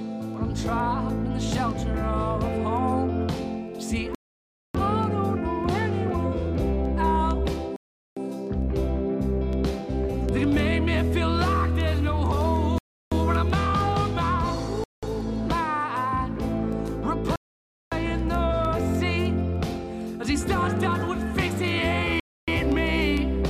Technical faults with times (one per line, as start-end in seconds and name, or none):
4.15-4.75 Bluetooth stall
7.76-8.17 Bluetooth stall
12.78-13.12 Bluetooth stall
14.84-15.03 Bluetooth stall
17.36-17.92 Bluetooth stall
22.20-22.48 Bluetooth stall